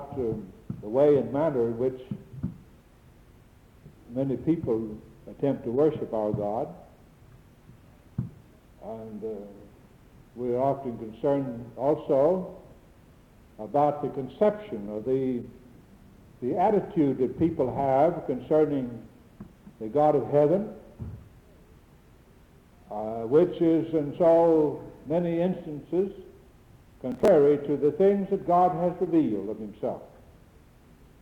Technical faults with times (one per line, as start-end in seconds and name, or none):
27.12-27.28 processor overload crackle